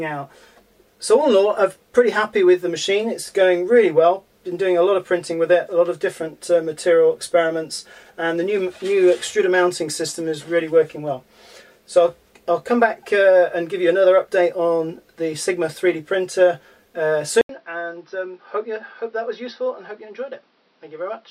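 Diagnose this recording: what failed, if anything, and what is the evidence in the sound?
At 17.41 s the sound drops out for 80 ms. When it returns it is duller and boxier, with nothing above 5.8 kHz. The level falls by roughly 10 dB, and a new noise floor appears, around 40 dB below the signal. This continues to the end. The fault sits at the driver and device stage. The likely cause is an input switched to a poorer device, such as another microphone or a headset's call profile, whose narrower band, level and noise replace the original path.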